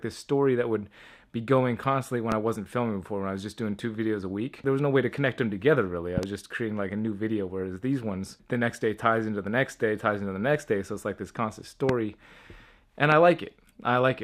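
A loud pop lands at 2.32–2.34 s, a second loud pop at 6.18–6.26 s arrives as two quick hits, and single pops follow at 11.89–11.92 s and 13.12–13.14 s. Each peaks about 15 dB above the surrounding sound, which continues unbroken underneath. The burst likely comes from a sudden voltage step or pulse, such as a plug, a switch or static, that the downstream circuitry shapes into a brief, sharp thump.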